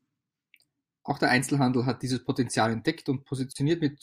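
At 3.53 s, a 30 ms gap at a join of encoded pieces silences the speech. Untrimmed encoder delay and padding leave smeared edges before it resumes.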